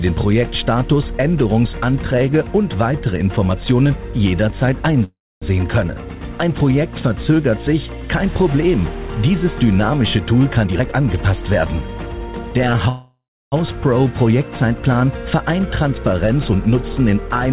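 At 5.04 s the sound stops for a call audio freeze lasting about 0.38 s, likely from delayed packets draining the jitter buffer. A fading buzz continues the last sound, then about 0.26 s of silence. On the waveform this is a tapering stub and a flat gap before the sound resumes unbroken.

From 10.64 to 12.52 s a jitter buffer speed-up plays the sound at 119% speed with unchanged pitch, trimming roughly 0.4 s as the buffer sheds excess delay. It sounds hurried. A spectrogram shows compressed timing, while harmonic spacing and the 4 kHz band edge stay put.

A second call audio freeze runs from 12.89 to 13.54 s. About 0.63 s is filled, likely because packets stalled in transit, with a decaying hiss ending in roughly 0.31 s of silence. The spectrogram shows smeared energy fading to a blank column, and nothing is lost afterward.

From 15.63 to 17.47 s a milder jitter buffer speed-up runs at 106% and removes about 0.1 s in tiny pitch-period cuts. 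The quickening is slight. The waveform shows pitch periods removed many times, and the pitch contours on the spectrogram are not shifted.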